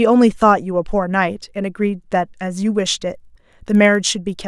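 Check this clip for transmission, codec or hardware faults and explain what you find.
One fault is present: a resampler restarted on every block, running from 2.8 s to the end of the speech. The 48 kHz to 24 kHz conversion handled each 50 ms block in isolation, so at every edge the filter lacked the real neighbouring samples and left a small error. The result is a ticking buzz at 20 Hz, heard only while speech is present. A spectrogram shows faint vertical broadband lines every 50 ms, and the waveform shows small steps at each block boundary.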